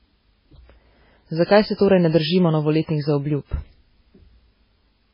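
Throughout, the speech has nothing above about 5.3 kHz and sounds watery and swirly, likely heavy MP3 compression at a very low bitrate, zeroing weak frequency lines.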